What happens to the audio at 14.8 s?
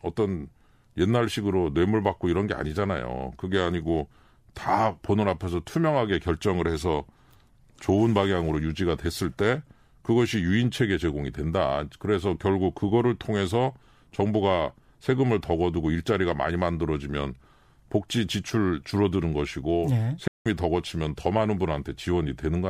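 At 14.8 s the audio runs through intact, with no dropout, click, distortion or other fault at that point.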